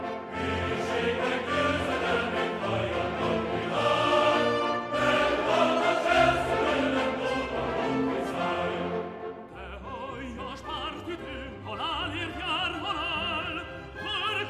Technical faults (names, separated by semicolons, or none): none